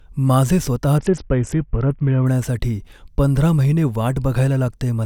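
From 0.98 to 2.26 s, a Bluetooth SBC bit pool drop dulls the speech and adds gritty noise. The sound points to a bit pool of 7, near 61 kbps.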